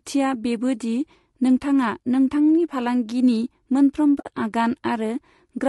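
Throughout, the speech sounds rough and grainy, with a hiss between the harmonics and a thin, somewhat synthetic top end. This is plainly audible low-delay AAC compression, likely AAC-ELD at a low bitrate near 32 kbps, whose short frames resolve pitch harmonics poorly.

From 4.19 to 4.27 s the sound fades out into a soft-edged hole and fades back in. This is AAC frame loss with muting. The decoder zeroed the missing spectrum, and the overlapping windows smoothed the edges over about a frame each, leaving roughly 60 ms missing, which fits a few consecutive lost frames.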